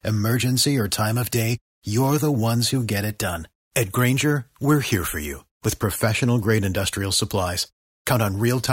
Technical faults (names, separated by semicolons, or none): none